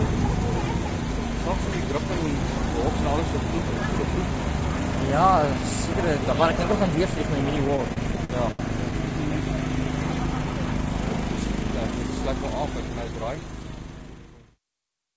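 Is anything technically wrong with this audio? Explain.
Yes. Between 7.68 and 8.94 s the sound suffers repeated stalls (stutter): ten short holds, the longest about 74 ms, adding roughly 220 ms in total and covering about 17% of that stretch. Packets arrived late, the jitter buffer kept running dry, and the receiver stretched the last sound to bridge each wait, fading it in the longer ones. Nothing is lost, but the passage drags and hiccups. A spectrogram shows brief smeared, frozen bands, faded toward the ends; the waveform shows repeated, sustained segments. The band stops at 8 kHz, which fits the G.722 call codec.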